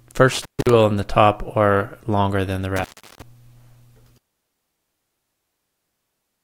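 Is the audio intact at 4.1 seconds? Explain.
Yes, at 4.1 seconds the audio is intact, with no dropout, click, distortion or other technical fault at that moment.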